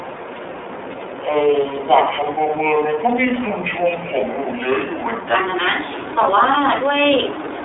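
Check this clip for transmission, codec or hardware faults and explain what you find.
Two faults are present. The whole clip has passed through the iLBC codec, and its opening section plays at the wrong speed.

The iLBC codec affects the entire recording. The band is narrowband telephone width, roughly 300 Hz to 3.6 kHz. Nothing is present above 3.8 kHz. The codec builds each 30 ms frame's excitation on its own, without drawing on the previous frame. That fits its 13.33 kbps mode. The damage is plainly audible. Speech sounds clear but slightly rough and synthetic.

A section at the wrong speed runs from 0.0 to 5.36 s. It plays at 0.64 times the original rate. Pitch and tempo drop together, by about seven semitones. The speech sounds deep, slow and drawn out. At 5.36 s it jumps back to normal speed and pitch. The likely cause is a player or editor fitting that stretch to the wrong clock.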